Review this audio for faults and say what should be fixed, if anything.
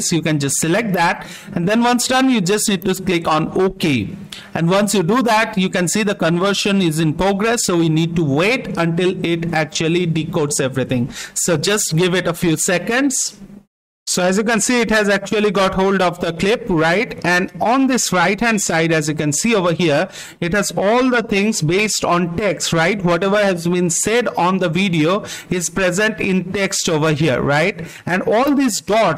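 Clock drift buffer slips recur from 1.63 s to 28.00 s: a regular click every 1.55 s, about twenty in all. The likely cause is two devices on independent clocks, differing by roughly 100 ppm, so the buffer overflows or underruns and drops or repeats a few samples each time. Locking both devices to one word clock, or resampling asynchronously at the boundary, would prevent it.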